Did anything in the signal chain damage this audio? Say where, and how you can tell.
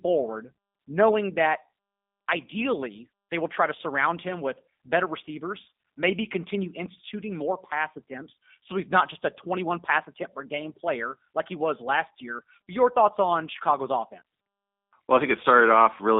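Yes. G.729 codec damage runs throughout the speech: a 200 Hz to 3.7 kHz band and a rough, synthetic texture from pulse-based resynthesis, fitting 8 kbit/s G.729A.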